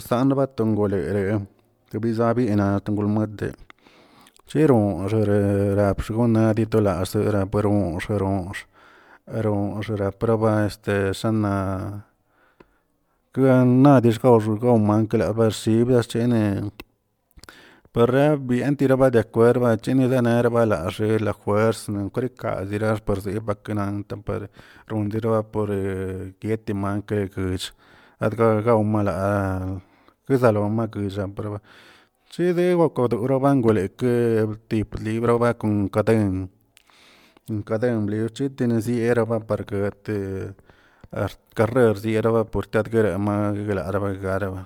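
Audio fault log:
throughout: generation loss. The speech was likely decoded and re-encoded as MP3 about four times, each pass at what sounds like 128 kbit/s on a shifted frame grid. Errors stack into a swirly, hollow, smeared tone with blurred onsets and nothing above 20.1 kHz.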